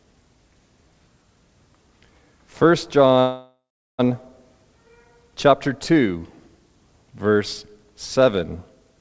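At 3.2 s the sound stalls until 4.01 s. This is a call audio freeze. The last sound smears into a fading buzz, then goes silent for about 380 ms. Late packets likely drained the jitter buffer. Playback resumes where it stopped, now 0.79 s behind.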